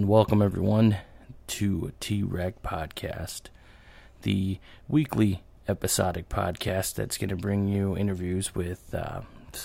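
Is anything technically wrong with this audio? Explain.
Yes. There is a dropped buffer (overrun) at 6.69 s, between "the weekly episodic" and "that's going to bring". The program likely failed to collect a buffer before the hardware overwrote it. A few milliseconds vanished and the surrounding audio joined directly, heard as a small jump with no silence.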